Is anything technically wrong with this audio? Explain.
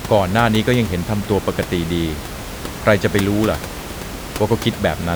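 No, there are no technical faults.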